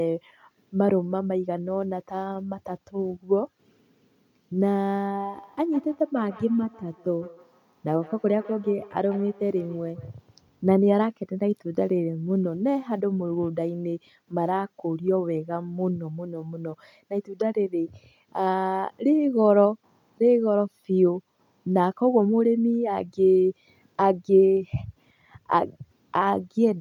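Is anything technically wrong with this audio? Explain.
Yes. Feedback echo between two devices, 5.14 to 10.18 s: a second device replays this microphone's signal, which the echo canceller misses, so speech recurs roughly every 150 ms, thin and ringing, about 20 dB down.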